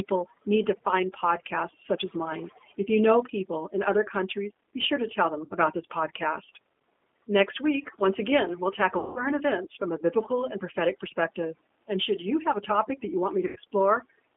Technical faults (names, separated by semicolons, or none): overdone noise removal; G.729 codec; VoIP packet loss concealed by the speech codec